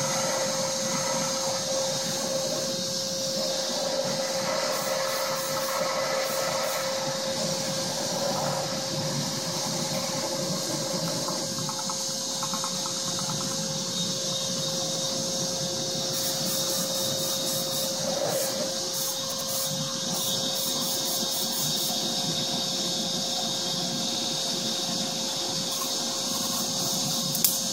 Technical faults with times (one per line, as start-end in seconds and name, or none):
14.95-15.05 repeated buffer
19.32-19.50 repeated buffer
24.15-24.33 repeated buffer
26.38-26.56 repeated buffer